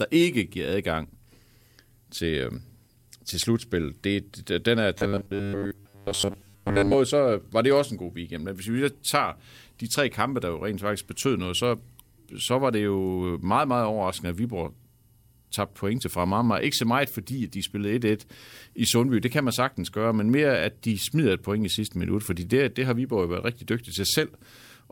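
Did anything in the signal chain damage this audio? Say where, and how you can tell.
Yes, and it's a robotic sound from repeated short buffers, likely at the driver or buffer stage. Between 4.98 and 6.94 s, after "det det den er" and before "så var det også", the speech turns into a rigid 100 Hz buzz. About 10 ms chunks keep replaying while most of the real audio gets skipped.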